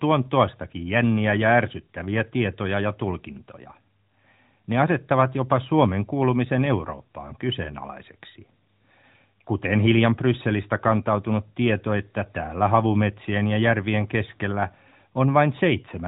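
Speech over an AMR narrowband mobile codec path, band-limited at 4 kHz with only light coding texture that fits the 12.2 kbps mode, and no technical faults to report.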